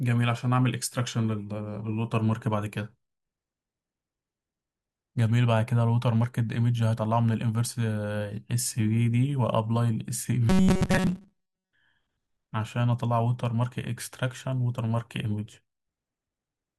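From 10.49 s to 11.72 s the speech takes on robotic sound from repeated short buffers: a rigid, metallic buzz at about 188 Hz, while the rough shape of the words still comes through. The likely cause is audio arriving too seldom, so playback loops the last fragment, here around 5.3 ms, to fill the gaps. Most of this stretch consists of repeats, with the real audio in between skipped.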